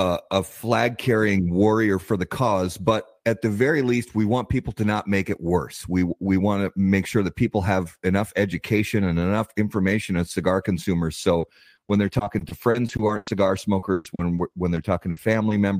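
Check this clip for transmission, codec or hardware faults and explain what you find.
One transmission fault is present. From 11.23 to 15.59 s, just after "information as cigar consumers", there is repeated packet loss (robotic sound). Twenty gaps, the longest 120 ms, were concealed by extending the preceding audio. That covers about 16% of the stretch, leaving the speech choppy and robotic.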